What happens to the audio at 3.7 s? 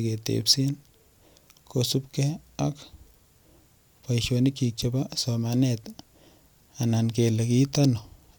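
Nothing goes wrong at 3.7 s: the speech there plays through intact, with no dropout, click, distortion or other fault.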